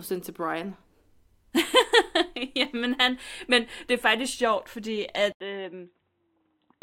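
The recording input likely switched to a poorer device at 5.32 s in this speech clip. After an 80 ms silence, the sound to the end turns dull and boxy, with nothing above 3.9 kHz, a few decibels quieter, and a faint new noise floor.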